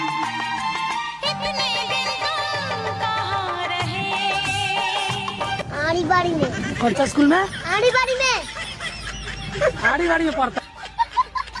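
Nothing goes wrong anywhere in this audio; there's no technical fault to point to at any moment.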